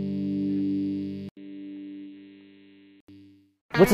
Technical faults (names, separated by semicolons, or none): input switched to a poorer device